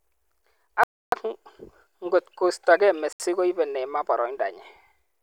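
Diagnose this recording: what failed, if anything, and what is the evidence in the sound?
Bluetooth stall, 0.84–1.12 s and 3.13–3.20 s: speech drops to silence for 288 ms and 73 ms, then resumes, likely the headphone buffer running dry while awaiting resent packets.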